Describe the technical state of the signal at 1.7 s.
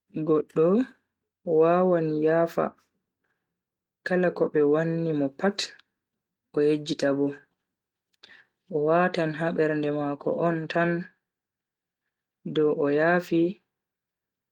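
At 1.7 s the speech is intact, with no fault present, and the Opus voice compression carrying it is working normally in its fullband hybrid mode with only light coding texture.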